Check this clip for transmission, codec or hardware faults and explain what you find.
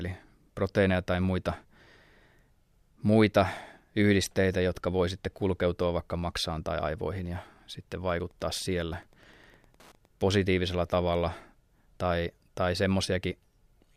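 One fault is present, Wi-Fi interference, from 8.09 to 10.09 s. Across those two seconds a faint, steady ticking sits well beneath the speech, at roughly -35 dB relative to it, repeating about ten times a second. The ticks arrive every 102.4 ms, the beacon interval of a Wi-Fi radio. A transmitter close to the audio circuitry radiates each beacon burst, and the circuit rectifies that energy into a small audible click.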